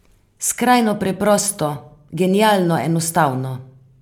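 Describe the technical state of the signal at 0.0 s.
At 0.0 s the audio is intact, with no technical fault present at that moment.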